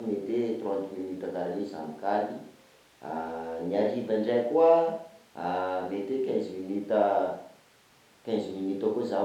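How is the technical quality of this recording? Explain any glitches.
No glitches to speak of here, as nothing in this speech recording stands out as a technical problem.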